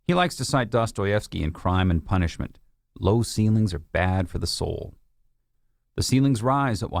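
No technical faults can be heard in the speech.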